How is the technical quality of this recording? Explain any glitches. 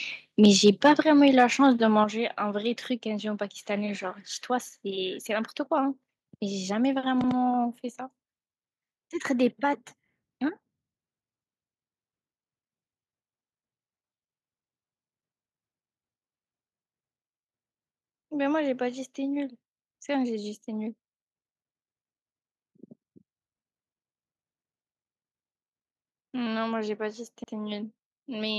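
The recording has clear technical problems: distortion at the start, two sudden level drops, and two brief repeats later on.

Microphone overload occurs from 0.43 to 1.0 s and again from 1.39 to 1.67 s, with peaks pushed about 3 dB and then about 1 dB past the converter's limit, likely from excessive input gain. The tops of the loudest syllables are sheared off, giving a harsh crackle. A waveform shows flattened peaks, and a spectrogram shows smeared high-frequency energy.

Microphone volume stepped down at 1.02 s, by about 5 dB, and at 2.04 s, by about 6 dB, each following a distorted stretch. The likely cause is call software automatically cutting the device's input level. Speech and background both drop abruptly. The waveform envelope shrinks in a clean step.

Overlapping chunks appear at 7.24 and 27.44 s, where 100 ms of audio plays twice. Each processing block starts before the previous one has finished, so the join repeats a sliver of sound and is heard as a stutter or click. 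The blocks are about 10 s long. A spectrogram shows a duplicated patch with a vertical seam.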